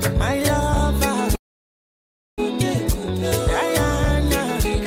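Packets were likely held up in transit and the jitter buffer ran dry, causing a call audio freeze from 1.35 to 2.40 s: roughly a second of near-silence, then the sound resumes intact, now running about one second later.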